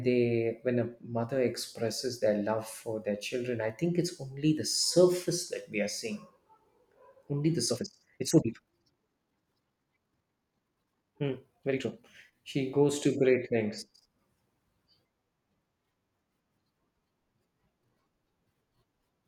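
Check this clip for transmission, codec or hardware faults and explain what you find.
One fault stands out, a time-stretched section. From 7.64 to 12.06 s the speech abruptly runs at double speed, rushed, yet its pitch stays unchanged. That pairing likely comes from software squeezing the passage to fit a shorter length by dropping short slices while preserving pitch.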